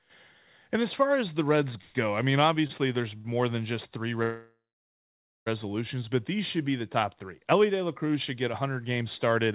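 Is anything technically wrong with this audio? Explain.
Yes, there are several faults, all heard over narrowband call audio that stops at 4 kHz.

A call audio freeze at 1.81 to 1.97 s, just before "I mean", and again at 4.23 to 5.48 s. Packets were likely held up and the jitter buffer ran dry, so the last sound was extended as a fading buzz before the speech resumed where it had stopped. The second freeze includes about 0.89 s of silence. On a spectrogram, this appears as smeared, flattening bands and then a blank stretch.

Short stalls from late packets at 2.67 to 2.71 s and at 3.17 to 3.27 s, just before "than just three". The last sound is briefly held too long with a slight buzz or dip, visible as a short horizontally stretched patch in the spectrogram.

One channel drops out at 8.49 to 8.54 s, between "should get" and "games started at". The level abruptly falls by about 6 dB, likely because one stereo channel was lost before the mono sum. 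The waveform shows a sudden narrow dip in amplitude.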